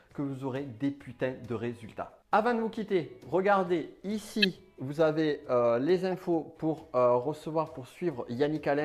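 At 4.42 to 4.45 s a corrupt frame decoded, spanning a few frames, bursts out as a loud chirp peaking around -10 dBFS. Bit errors misplaced spectral energy. A fainter blip, around -30 dBFS, follows at 6.12 to 6.14 s from one frame. Both appear as brief vertical smears on a spectrogram and short waveform spikes.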